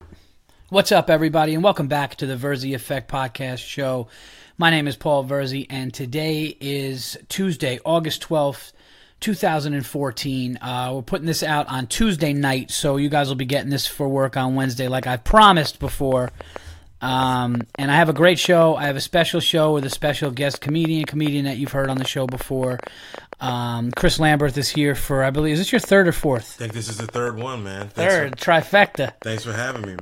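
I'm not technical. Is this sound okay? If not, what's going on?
No, not quite. From about 14.64 s right through to 30.00 s there's a train of clicks: a run of little ticks or pops sitting on top of the speech, close to six a second but at an uneven pace, roughly a hundred in all. They sound much alike and carry on through the pauses too. That points to something outside the speech itself, likely electrical interference from nearby gear or a faulty connection or power supply.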